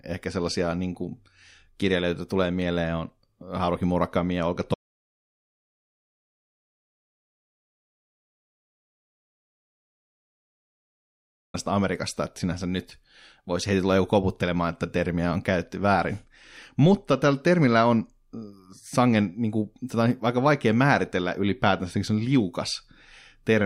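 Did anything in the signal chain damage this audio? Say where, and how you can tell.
Yes. There's an audio dropout to silence from 4.74 to 11.54 s, about 6.8 s of speech simply gone. It's plain silence, not even room tone, so the input was likely lost upstream, a disconnect or link failure, while the recorder kept writing silence.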